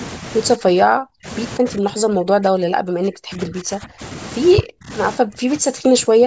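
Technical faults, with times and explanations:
0.56–1.27 s, 1.59–4.02 s, 4.56–4.91 s and 5.16–6.26 s, speech suppressed in double talk: the speech sinks by up to about 40 dB in stretches, likely because the echo canceller suppressed it while the far side spoke. Unlike packet-loss dropouts, these are long, uneven dips rather than short clean gaps.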